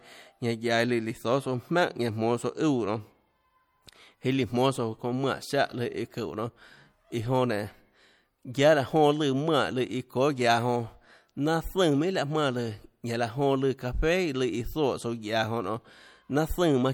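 Speech, with plainly audible coding damage from start to finish. The likely cause is MP3 compression, and the damage fits a bitrate around 64 kbps. The encoder divides the sound into narrow frequency lines and spends its limited bits where hearing is most sensitive. Weak lines get zeroed, and they flicker on and off between frames. The result is a watery, swirling texture and smeared consonant attacks. Nothing remains above 20.7 kHz.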